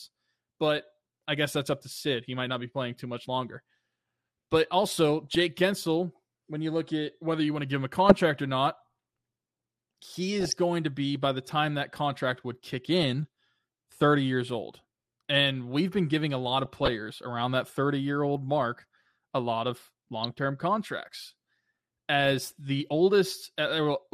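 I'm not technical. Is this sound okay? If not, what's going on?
No. The whole recording sounds dull and plainly gurgly, likely from MP2 compression, which drops upper frequencies and roughens what remains. There is also DAB burbling: brief bursts of noisy blips from reception errors, at 5.25–5.40, 8.06–8.21, 10.41–10.53, 12.99–13.10, 16.65–16.92 and 20.24–20.38 seconds.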